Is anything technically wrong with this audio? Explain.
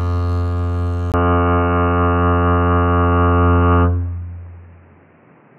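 Yes. At 1.12 s the input was likely switched to a poorer device, and the music stays on that path to the end. The new input passes a much narrower band, cutting everything above about 3 kHz, so the music turns dull and boxy at once. A silence of about 20 ms marks the switch, the level shifts by about 5 dB, and a different background noise appears roughly 35 dB below the music.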